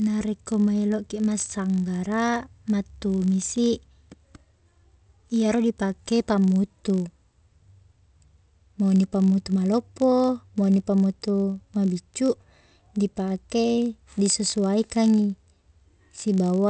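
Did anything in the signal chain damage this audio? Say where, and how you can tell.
Yes: the sample-rate converter stage, with the resampler restarted on every block. A 50 Hz buzz rides on the speech throughout, which fits 20 ms blocks converted from 44.1 kHz to 16 kHz, each with its own edge error.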